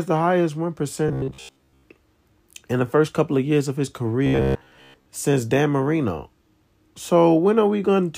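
In this speech clip the voice turns into a rigid, metallic buzz at about 66.7 Hz from 1.08 to 1.83 s, after "the highest win", and from 4.27 to 5.06 s, after "of years of his". This is robotic sound from repeated short buffers, likely a 15 ms block being looped while most of the real audio is skipped.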